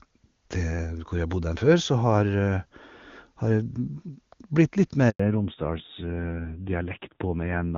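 Up to 5.1 s the call sounds like clean HD Voice, with AMR-WB at a high rate and barely any codec roughness. At 5.10 s there's a handover gap: the phone hops to another network and no speech frames arrive during the switch, so the sound drops out for about 100 ms, until 5.20 s. It's a short dead hole rather than a gradual fade, and whatever was said in that window is simply gone.

Right after, from 5.20 s to the end, you get a fallback to narrowband. The call has been handed to the old AMR narrowband codec, and nothing above 4 kHz survives. The speech loses its air and crispness and turns boxy and a bit grainy. That rougher texture fits a low narrowband rate, something around 7.4 kbit/s, a clear step down from the wideband sound before the gap.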